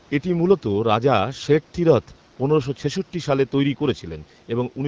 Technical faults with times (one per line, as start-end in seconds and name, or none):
none